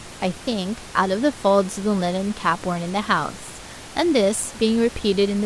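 No technical faults can be heard anywhere in the recording. Room noise sits in the background, about 18 dB below the speech, as part of the space where the microphone was placed.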